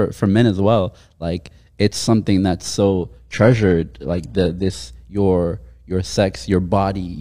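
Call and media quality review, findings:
Adaptive stream at a lower bitrate, 2.84 to 4.84 s, after "it's something that's", recovering at "your your". Sudden switch, no gap: treble turns synthetic and codec artefacts rise. Stream player dropped quality on a slowed connection; fits a fall to roughly 20 kbit/s HE-AAC.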